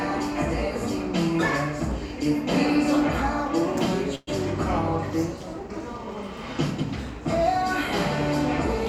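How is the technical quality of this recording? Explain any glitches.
There is one glitch in this recording of everyday sounds: a call audio freeze from 4.15 to 4.29 s. The last sound stretches into a brief fading buzz for about 0.12 s, likely because delayed packets emptied the jitter buffer. Unlike a dropout, nothing is lost. The audio resumes where it stopped, just that much later.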